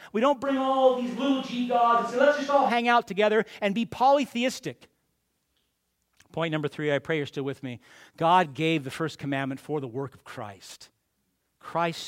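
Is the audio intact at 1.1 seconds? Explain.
No. From 0.47 to 2.68 s the close microphone's signal likely drops out and the recording falls back to a distant microphone. The speech turns suddenly roomy and hollow, loses bass, sits about 5 dB quieter, and carries more audible background noise until the close sound returns.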